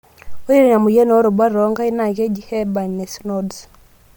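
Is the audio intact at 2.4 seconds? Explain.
No. At 2.4 seconds the speech carries Bluetooth LC3 compression damage, which runs through the whole clip and is likely from that codec at a rate fitting 48 kbps. Its 10 ms transform frames thin the upper band and refill it with noise, giving a grainy, breathy edge. A spectrogram shows smeared, speckled highs with nothing above 20.2 kHz.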